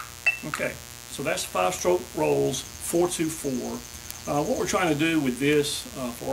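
A steady, raspy buzz sits under the sound from start to finish, about 15 dB below it, with a gritty edge that reaches well above its 60 Hz base into the kilohertz range. This is mains buzz: sharp switching spikes, twice in each 60 Hz mains cycle, are getting into the signal path. A light dimmer, a rectifier or a missing shield would let in that spiky, harmonic-rich interference rather than a smooth hum.

From 0.18 s to 6.24 s, sharp ticks of uneven strength repeat at a steady rate of roughly one every 0.2 s, some forty in all. These are word clock ticks. The receiving device is running on its own clock, not locked to the sender's digital stream. The two clocks differ by something on the order of 100 ppm, so they slowly slide apart. Each time they slip past each other, a single sample is dropped or repeated, and that small break in the waveform is heard as a click.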